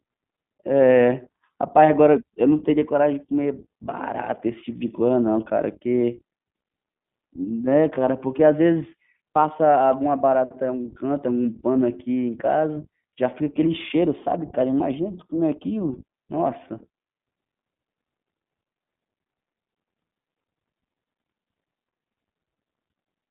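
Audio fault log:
Throughout, iLBC codec: The speech is confined to a telephone band, from about 150 Hz up to 3.6 kHz. Nothing above that survives, so sibilants sound dull. Each short frame is coded on its own, without help from the one before. That leaves a rough, slightly synthetic grain on the speech. The damage is plainly audible. The texture points to 20 ms frames and fits the 15.2 kbps mode.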